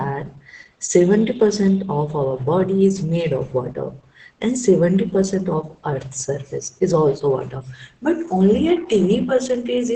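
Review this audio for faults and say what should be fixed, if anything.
Throughout, the speech sounds muffled, hoarse and faintly robotic, with nothing above 9.1 kHz. This is heavy Opus voice compression, coarsely coding the excitation at what fits about 10 kbps. Encode at a higher bitrate to prevent it.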